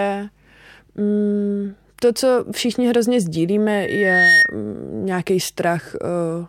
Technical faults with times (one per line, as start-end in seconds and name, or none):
3.73-4.55 loudspeaker feedback squeal